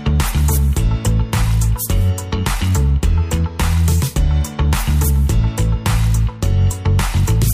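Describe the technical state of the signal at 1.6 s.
At 1.6 s the signal is intact, with no dropout, distortion, click or other fault to be heard there.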